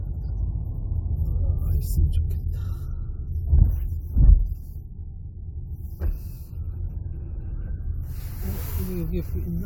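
No technical faults are audible.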